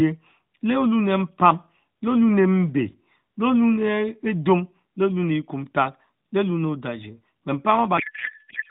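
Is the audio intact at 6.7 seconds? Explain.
Yes, at 6.7 seconds the speech is intact, carried through the AMR narrowband mobile codec at 12.2 kbps with its usual 4 kHz ceiling and only light coding texture, and with no dropout, click or other fault at that moment.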